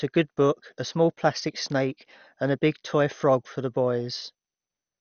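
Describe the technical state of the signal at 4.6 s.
At 4.6 s, as throughout, the speech sounds dull and gurgling, with nothing above 6.5 kHz. Likely MP2 compression near 48 kbps, starving upper sub-bands.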